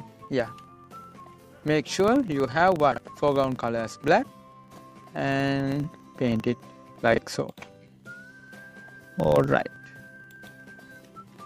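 Filter restarted on every block, throughout the clip: a regular buzz at 25 Hz runs under the whole sound. The filter is cleared at the start of each 40 ms block and begins again from silence, so each block opens with a small transient before the filter settles. These ticks repeat at the block rate and grow louder and quieter with the level of the sound, which makes them a buzz that follows the signal rather than a steady hum.

Chunks out of order at 2.92 to 2.98 s, 4.72 to 4.78 s and 7.14 to 7.18 s: the audio is cut into 20 ms chunks, and at each of these points one chunk plays late. At 2.92 s and 4.72 s it comes two chunks behind its proper place, and at 7.14 s one chunk behind. Nothing is missing, but the reordering leaves three hard joins at each spot, heard as a short jumbled stutter.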